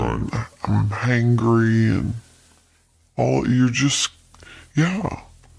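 From start to finish the speech plays back too slow and too low, the classic sign of a wrong sample rate. Audio captured at 32 kHz is being clocked out at about 22 kHz with no conversion. Everything runs at roughly 0.69 times normal speed, dropping pitch by about 6.45 semitones. Voices sound heavy, drawn out and sluggish. On a spectrogram, harmonics and formants sit compressed lower in frequency. The waveform's syllables are stretched wider in time.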